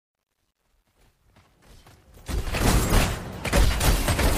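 A fade-in stage kept too few bits and added no dither, causing truncation distortion on a fade across the opening from 0.0 to 2.68 s. As the level climbs from near silence, the quietest part of the waveform collapses into a handful of coarse square steps, which fits roughly 11-bit resolution. From 0.0 to 1.73 s the sound is at its worst, gritty rather than rising cleanly, and the grit eases as the fade reaches full level at 2.68 s. Shortly afterwards, damaged data in a compressed stream corrupts the frames between 2.89 and 2.93 s. The decoder misreads that stretch, loses sync and hunts for the next valid frame header, producing a brief chirp or blip about 40 ms long.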